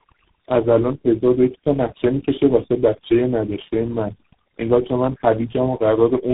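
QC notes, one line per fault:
Throughout, overdone noise removal. The background drops and breaks up into twinkling specks. The noise reduction was set too hard, so bands near its noise estimate are pulled down or cut, taking quiet parts of speech along.
Throughout, tandem speech coding. The speech passes through four speech codecs in a row, including G.723.1 at 6.3 kbit/s, GSM full rate and G.726. Each one recodes the last one's damage. The result is rough, muffled and warbly, with nothing above 3.8 kHz.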